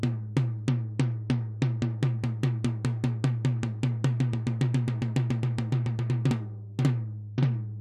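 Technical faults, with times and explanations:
0.68 to 1.94 s and 7.25 s to the end, Bluetooth SBC bit pool drop: treble dulls and gritty noise rises as a congested link starves the encoder, which fits a cut from bit pool 28 to 11, near 90 kbps.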